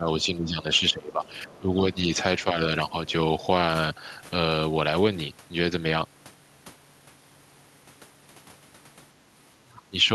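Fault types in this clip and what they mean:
Speech suppressed in double talk, at 0–0.07 s, 0.23–1.25 s, 1.47–1.97 s, 2.44–2.56 s and 9.65–9.96 s: the speech level dips in patches, by only a few dB at 2.44 s, around 10 to 15 dB early on, and deepest, roughly 20 dB, near the end. The likely cause is an echo canceller that heard both parties talking at once, could not tell the near talker from the loudspeaker echo, and attenuated everything.
Other side's voice leaking through, at 0.74–0.79 s and 1.25–1.59 s: a faint second voice surfaces, first as a brief scrap and then as a short stretch, sitting roughly 25 to 30 dB below the main speech. This is likely residual loudspeaker echo that the canceller failed to remove from the microphone signal, and it appears during the same early stretch in which the main speech is being ducked.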